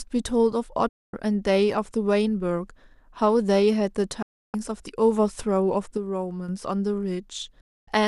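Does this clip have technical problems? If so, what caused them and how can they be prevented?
Yes. Digital broadcast dropouts occur at 0.89 to 1.13 s, 4.22 to 4.54 s and 7.61 to 7.88 s. The audio fades to silence within about 3 ms and stays muted for 240, 312 and 264 ms. That pattern fits a receiver that lost the signal or rejected corrupted frames, holes that suggest 24 ms frames. The speech sent during each gap is gone. Stronger error protection, better reception or a more robust transmission mode would prevent these.

A sudden gain jump runs from 5.97 to 6.49 s. The speech and the background noise drop together by about 6 dB in a single step, then jump back up, with no ramp in either direction. The likely cause is a gain setting or bit shift applied instantly in the digital chain. Smoothing every gain change over a few milliseconds would prevent it.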